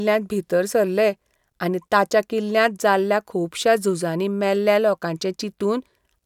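No technical faults are audible.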